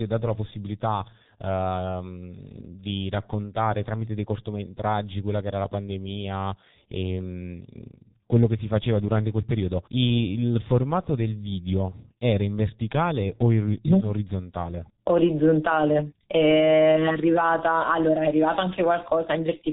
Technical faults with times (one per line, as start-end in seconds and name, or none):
0.00-19.73 G.723.1 codec